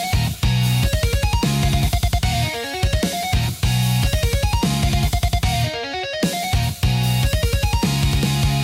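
No technical faults can be heard anywhere here.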